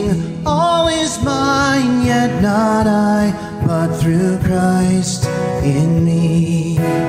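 The signal stays intact across the whole recording, with no dropouts, distortion or other technical faults audible at any point.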